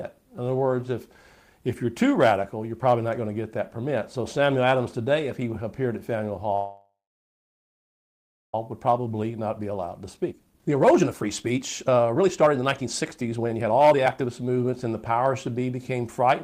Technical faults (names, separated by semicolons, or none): call audio freeze; jitter buffer speed-up